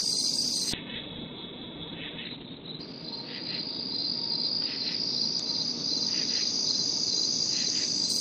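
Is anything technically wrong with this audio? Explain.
Yes. From 0.73 s to 8.15 s, a call bitrate drop makes the encoder code coarsely, so the sound turns rough and muffled. The spectrogram shows content above about 4 kHz vanishing, which suggests the rate fell from around 32 to about 6 kbps.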